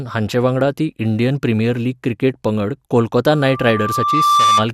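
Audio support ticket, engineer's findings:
Loudspeaker feedback squeal, 3.27 to 4.69 s, kicking in right after "प्रिमियर लीग क्रिकेट पंगड". Single 1.2 kHz tone, swells over roughly a second, ends up a few dB over the speech. Probable component: mic hearing its own PA speaker. Loop gain tops unity at 1.2 kHz, so that frequency keeps feeding itself until the loop breaks. Worth checking mic placement and gain, maybe notch 1.2 kHz.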